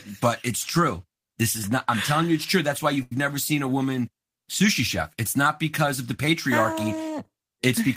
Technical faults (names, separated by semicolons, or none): short stall from a late packet